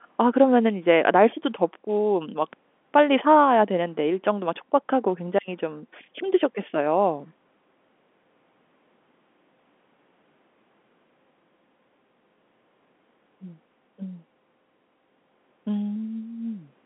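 No technical faults can be heard in this speech recording. It comes through the G.711 telephone path, with the sound held to the line band of roughly 200 Hz to 3.5 kHz and nothing reaching above 3.8 kHz.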